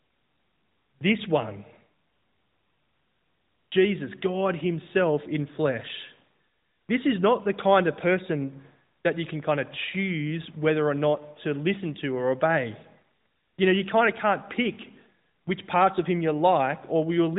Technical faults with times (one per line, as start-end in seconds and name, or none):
none